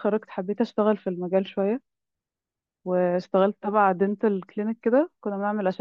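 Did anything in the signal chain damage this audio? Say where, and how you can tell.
No, nothing in the signal chain damaged this audio.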